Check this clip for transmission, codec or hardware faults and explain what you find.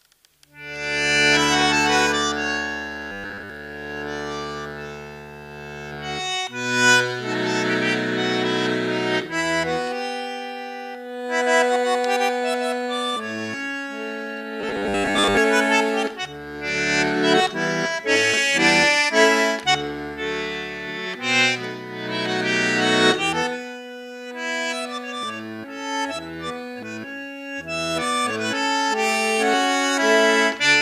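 Two short bursts of robotic sound from repeated short buffers occur, at 3.12–3.50 s and 14.61–15.37 s. A rigid 100 Hz buzz, likely from a 10 ms slice repeating while most incoming audio is dropped, shows as evenly spaced harmonics and identical waveform cycles.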